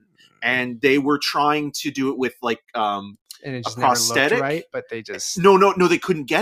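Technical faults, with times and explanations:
0.0 to 0.41 s, sound cut by the noise suppressor: the suppressor mistook the opening sound for background noise and applied heavy gain reduction to it, pulling it down by about 22 dB at its deepest for roughly the first four tenths of a second. The start of the clip therefore sounds sunken, as if faded under, and any sustained part of it is clipped short instead of ringing out naturally.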